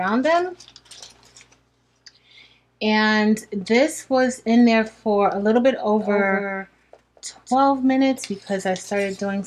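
A doubled audio track runs from 6.01 s to 7.55 s, where a second full-band copy of the audio sits roughly a fifth of a second behind the original and somewhat quieter, around 5 dB down. The copy carries no decay or room colour, and it cuts in and out abruptly at both ends of that stretch. The likely cause is the same signal reaching the mix twice, either through a slower second capture path or through an edit leaving two misaligned copies.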